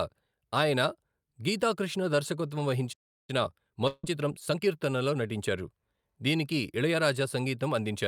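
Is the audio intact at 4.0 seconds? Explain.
No, not at 4.0 s. There's a long network dropout from about 3.87 to 4.05 s: the last sound smears into a fading buzz for roughly 160 ms, then about 20 ms of silence, and when audio resumes a short piece is simply gone, likely lost packets that never arrived. Around it, from 3.3 to 4.72 s, you get time-compressed catch-up, where the player trims and cross-fades tiny slices to clear its backlog, running about 1.25 times fast. The speech sounds rushed at normal pitch.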